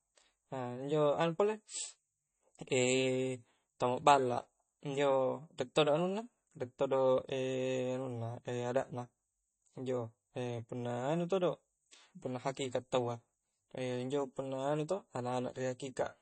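From start to finish the speech has a hard ceiling near 8.3 kHz. Nothing sounds above it, so s sounds lose their edge and the top end feels dull. The damage is plainly audible, and MP3 compression is the likely cause. At a starved rate, which fits a bitrate around 32 kbps, the encoder drops the treble at a fixed point. It also zeroes weak frequency lines, which flicker on and off between frames. The result is a watery, swirly texture with smeared attacks.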